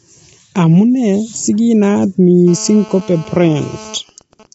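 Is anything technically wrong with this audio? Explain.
Yes, there are three faults.

Low-delay AAC compression runs through the whole clip. The speech sounds rough and grainy, with noise between the harmonics and nothing above 7.8 kHz. This is likely AAC-ELD: its short frames resolve pitch harmonics poorly, and the damage suggests a low bitrate of around 24 kbps.

GSM phone buzz runs from 2.48 to 3.95 s, starting just after "si kinaat". A nearby 2G phone in a call transmits radio bursts at about 217 Hz, and the audio circuit rectifies them. The result is a steady, hard, raspy buzz rich in harmonics, about 20 dB below the speech.

GSM signalling bursts follow from 3.95 to 4.46 s. The phone's user has gone silent, so the phone sends only short groups of bursts. Once rectified, these become even ticks with a longer 217 Hz buzz twice a second, somewhat quieter than the steady buzz.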